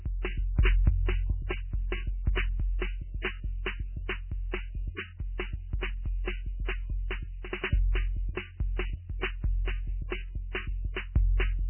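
Throughout, the music carries heavy MP3 compression damage: nothing sounds above 3.1 kHz, and weak frequency lines flicker between frames, giving watery swirl. This is likely a very low bitrate.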